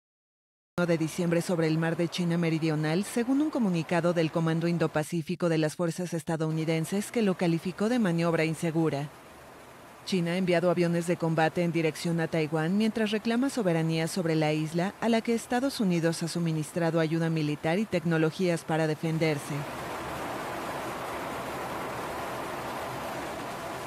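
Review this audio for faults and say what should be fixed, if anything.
A cut-off start: the first 0.78 s is digital silence, then the sound enters at 0.78 s already in progress, with no natural attack. Recording or streaming began late. On a waveform, a dead-flat line jumps straight into the ongoing signal; a spectrogram shows an empty band ending in an abrupt vertical edge.

To prevent it, start capture with a short pre-roll before the sound begins.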